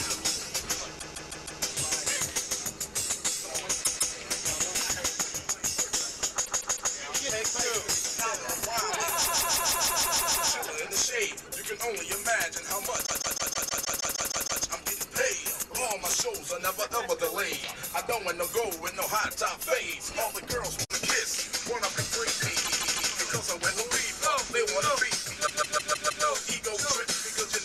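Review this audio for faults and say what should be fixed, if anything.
Repeated frames at 0.98–1.61, 3.83–4.14, 6.44–6.91, 9.24–10.49, 13.05–14.62, 22.64–23.11 and 25.46–26.24 s: the same 157 ms block of compressed audio replays two to ten times, causing a stutter and lengthening the audio. Fix the writer or transport so each compressed frame is sent and written only once, with sequence checks discarding duplicates.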